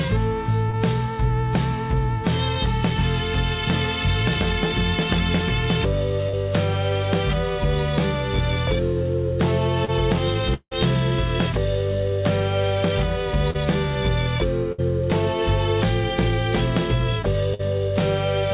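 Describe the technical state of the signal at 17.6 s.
At 17.6 s the sound briefly stops progressing: from 17.54 to 17.61 s the last sound is held and turned down as it goes, so it comes across as either a held buzz or a fading hiss before the audio picks up again further on. This is a burst of packet loss. Packets went missing or arrived too late, and the receiver filled about 48 ms by extending what it had last played. About 40 ms of the original audio is skipped where playback resumes.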